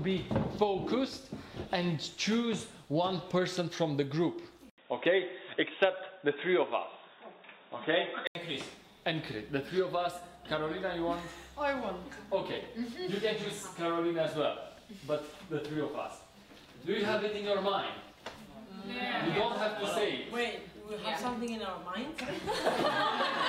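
Input switched to a poorer device, 4.70 to 8.35 s. After an 80 ms gap the sound turns dull and boxy, with nothing above 3.8 kHz, a level shift of about 5 dB and new noise roughly 40 dB down, likely from a narrower-band input.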